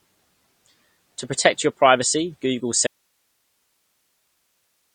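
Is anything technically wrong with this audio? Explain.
Yes, there are two faults in this speech clip.

AAC compression runs throughout. The speech is dull and smeared, with nothing above 9 kHz and a warbling, fizzy texture on sibilants and sustained sounds. The likely cause is lossy AAC-LC coding at a low bitrate, consistent with around 32 kbps. At that rate the encoder drops the top of the spectrum and quantises the remaining frequency bands so coarsely that parts of the spectrum go missing.

An audio dropout to a faint residue starts at 2.87 s and lasts to the end. The speech cuts off abruptly, not as a pause or fade, and only hiss remains, roughly 50 dB below the speech level. The likely cause is that the wanted signal was lost while the recording path stayed live, so only its own noise floor was captured.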